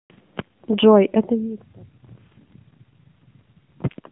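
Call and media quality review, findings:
AMR narrowband mobile codec, throughout: band limited to 150 Hz–3.6 kHz, buzzy synthetic speech from a low-rate vocal-tract model, which fits the 7.4 kbps mode.

AMR bit errors, 2.32–2.55 s: hoarse, scratchy, gargly speech at steady pitch and level. Flipped weakly protected bits misplace excitation pulses across about a dozen 20 ms frames.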